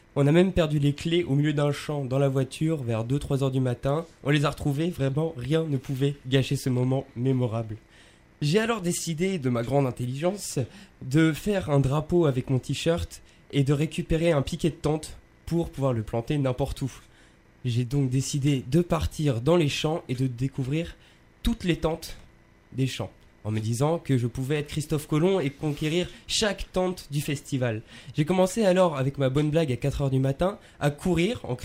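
Nothing here stands out as a technical fault; the audio runs along without any dropouts, glitches or other problems you'd notice by ear.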